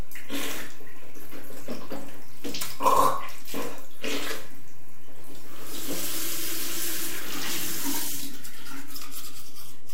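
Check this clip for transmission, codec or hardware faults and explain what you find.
One fault runs through the whole recording, a DC offset, and it makes no audible sound of its own. The entire waveform sits shifted from zero by a constant of about -20 dBFS, which uses up headroom on one side and shows as steady energy at 0 Hz.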